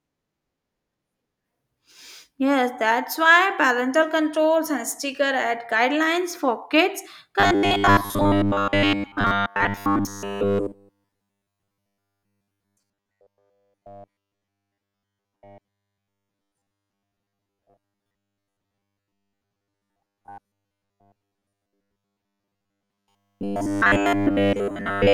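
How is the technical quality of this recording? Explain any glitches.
The recording breaks down partway through. From 7.40 s, right after "ad guidelines for kids", to the end, there is robotic sound from repeated short buffers. The speech becomes a stiff, metallic buzz at 100 Hz. It still roughly tracks the words. The likely cause is audio arriving too slowly. The software fills the gaps by repeating the last 10 ms chunk. Most of the sound is repeated this way, and the real audio in between is lost.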